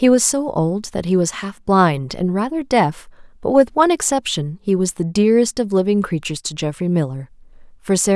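Speech with no audible faults.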